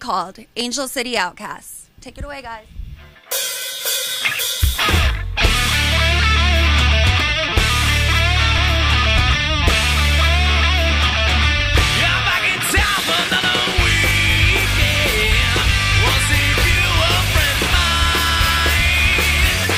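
At 0.61 s, 4.61 s and 8.58 s a brief click or tiny skip is heard, spaced roughly 4 s apart, consistent with a 4-second segment length. Each is an overlap between stream segments: adjacent segments carry timestamps that overlap, and playback trims the shared span even though that sound was not actually duplicated. A few milliseconds of audio disappear, and the waveform jumps discontinuously across the join.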